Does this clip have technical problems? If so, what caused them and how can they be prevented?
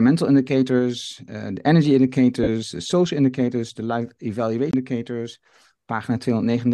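Yes, two. Right after "indicators eh de energy", from 2.43 to 2.48 s, lost LE Audio frames leave a short noisy smear of about 37.5 ms, which fits five 7.5 ms frames. The decoder replayed the last spectrum with scrambled signs, and the sound picks back up at "de social indicators de". A stronger link, with less distance, fewer obstructions and less 2.4 GHz congestion, keeps those frames from dropping.

Then, just after "social indicators de life", a CD skip at 4.71 to 4.73 s gives a mute of about 20 ms, with the audio resuming from a different spot on the disc. Keep the player isolated from knocks and use a clean, undamaged disc, or rip it with error-checking software.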